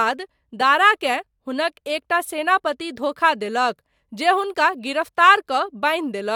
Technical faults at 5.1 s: none

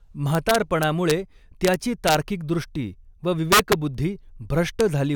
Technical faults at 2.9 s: none

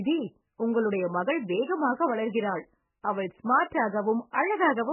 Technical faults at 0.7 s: MP3 compression

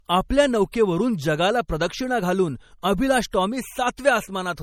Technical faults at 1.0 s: low-bitrate audio saved at a high bitrate

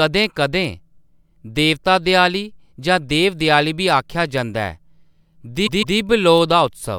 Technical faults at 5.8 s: repeated frames

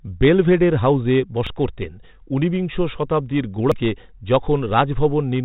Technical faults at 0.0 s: none

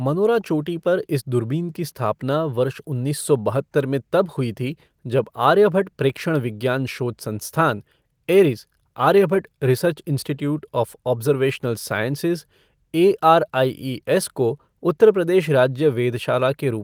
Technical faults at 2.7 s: none

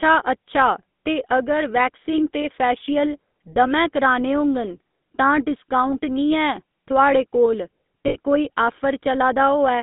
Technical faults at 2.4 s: GSM full-rate codec; lost GSM frames

